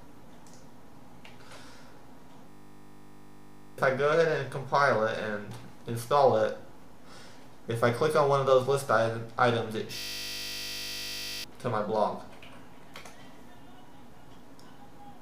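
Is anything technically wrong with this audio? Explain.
Yes. A system hang loop occurs at 2.50 to 3.78 s and again at 9.98 to 11.44 s. Each time, the system froze while the audio hardware kept replaying one 20 ms ring-buffer segment, 50 times per second. The result is a steady 50 Hz buzz in place of roughly a second and a half of lost audio. On a waveform, each stretch appears as identical repeating cycles. On a spectrogram, it shows as flat horizontal harmonic lines spaced 50 Hz apart.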